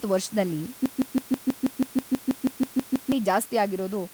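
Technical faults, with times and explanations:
0.86–3.12 s broken-record loop: playback likely stalled, resending its last 0.16 s fragment, so one speech snippet repeats 14 times back to back.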